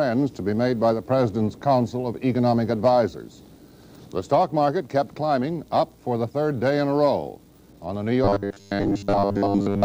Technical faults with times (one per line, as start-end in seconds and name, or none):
8.24-9.84 robotic sound from repeated short buffers